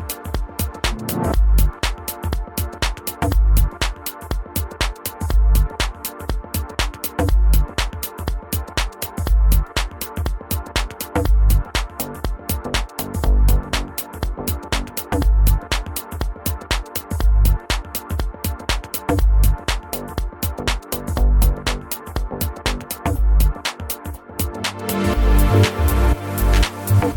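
Nothing here trips the ear at all; the audio just runs along with no glitches, dropouts or odd artefacts to point to anywhere.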